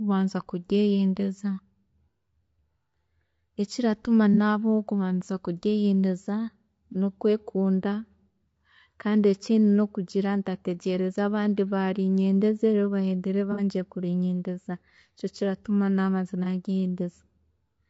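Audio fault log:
throughout: low-delay AAC compression. The speech sounds rough and grainy for the whole clip. There is a noisy haze between the harmonics, and the top band sounds thin and partly synthetic. The damage is plainly audible. This is likely AAC-ELD, the low-delay AAC used for video calls, at a low rate near 32 kbps. Its short frames cannot resolve pitch harmonics finely. With few bits to spare, noise fills the gaps.
4.34–4.38, 6.92–6.96, 13.52–13.61 and 16.43–16.47 s: AAC frame loss with concealment. Each spot is a brief smeared, noisy patch. The decoder lost data and rebuilt it from the last good spectrum. Three gaps last about 30 ms, which fits one lost frame. The gap at 13.52 s, just before "kurinyeendeza nikyo kiratuma", is about 60 ms, which fits two frames, so it smears longer.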